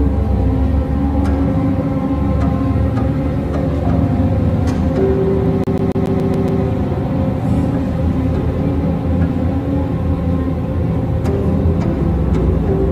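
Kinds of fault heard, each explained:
CD stuck on one turn: A scratch keeps throwing the laser back. One 0.14 s slice plays seven times in a fast, even stutter, muting briefly at each jump.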